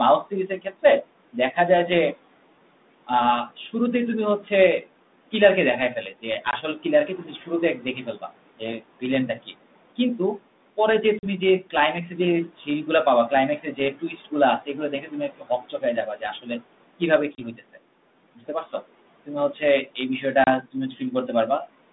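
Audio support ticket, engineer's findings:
Noise suppressor artifacts, throughout: background pulled down by about 18 dB between phrases, rising again under speech. Frame-by-frame band gains track the noise estimate and pump with speech level.

Speech cut by the noise suppressor at 0.25–1.57 s (drop up to about 18 dB), 3.07–3.74 s (about 11 dB), 6.1–10.78 s (about 18 dB), 12.48–17.78 s (about 18 dB, longest stretch), 18.35–19.87 s (about 15 dB) and 20.63–21.29 s (about 16 dB). Soft consonants and word tails misclassified as noise and attenuated, so they sound swallowed.

Packet loss on an ADPCM call at 6.51–6.56 s (20 ms gap), 11.19–11.27 s (40 ms), 17.35–17.41 s (30 ms) and 20.44–20.5 s (30 ms). Hard-edged silence, then slightly distorted speech on resumption. The decoder's adaptive predictor and step size desync from the sender's and take tens of ms to reconverge. Gap sizes fit a few lost 10 ms packets on a line band-limited to about 3.7 kHz, consistent with 32 kbit/s G.726.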